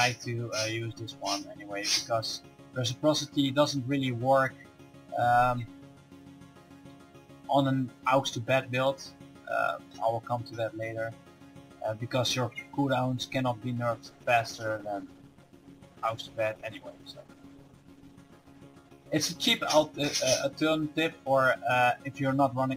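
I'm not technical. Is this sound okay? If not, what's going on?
No. From about 13.94 seconds the sound loses clarity and detail, becoming coarser and duller as the crisp top end disappears. It stays degraded until about 22.19 seconds, worst for roughly five seconds of that stretch, and clears just before the clip ends. This is a call bitrate drop: the call judged its connection had less room, so the audio was squeezed into far less data, which strips out fine detail and high frequencies.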